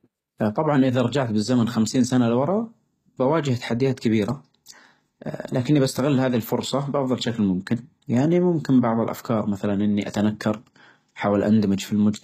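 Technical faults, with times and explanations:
Throughout, HE-AAC compression: the treble is rebuilt from copied lower bands, so s sounds come out gritty and lispy, with nothing above 14.9 kHz, likely from a low bitrate near 20 kbps.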